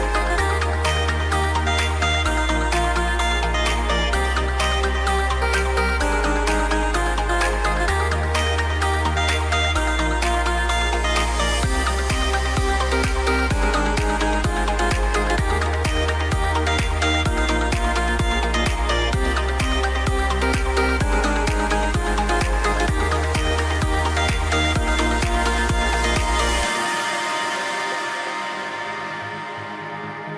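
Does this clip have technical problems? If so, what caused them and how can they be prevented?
No, nothing stood out as a technical problem on listening, so there is nothing here that needs preventing.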